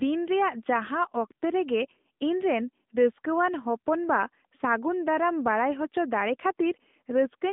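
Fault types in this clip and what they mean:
AMR narrowband mobile codec: a mobile speech coder rebuilt the speech from a vocal-tract model and a few pulses per frame, at a quality that points to a mid mode near 10 kbps. Only about 200 Hz to 3.6 kHz survives, with plainly audible synthetic coding grain.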